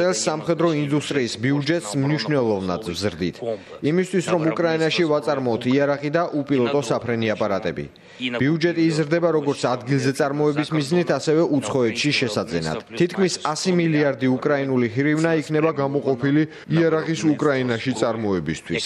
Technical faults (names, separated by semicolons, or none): wrong sample rate